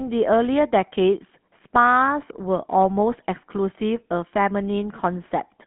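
Speech runs through a GSM full-rate codec for its whole length. The band is narrow, roughly 150 Hz to 3.4 kHz, so there is no low body and no top air. On top of that sits a buzzy, gravelly roughness that is plainly audible. It comes from the codec modelling the vocal tract and driving it with a sparse, regular pulse excitation. The result sounds consistent with a 13 kbps mobile-phone path.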